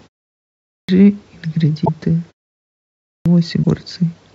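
The output device sleeps during silence and wakes late, causing a clipped start after a pause. At 0.60 s and 2.98 s, roughly 0.28 s is swallowed, so speech bursts in abruptly.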